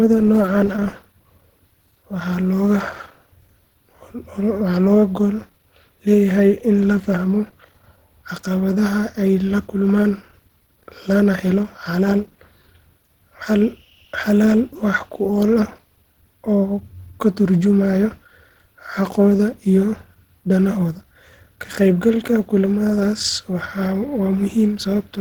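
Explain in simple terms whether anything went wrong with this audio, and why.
Yes. From the first second to the last, the speech has a rough, hoarse, grainy texture, and this damage is plainly audible rather than subtle. The likely cause is Opus compression squeezed to a low data rate. In this setting Opus runs a hybrid mode: a speech-oriented coder handles the lower frequencies and a music-style coder fills in the highs. The highs are approximated rather than kept exactly, which roughens the sound even though the full frequency range is still present.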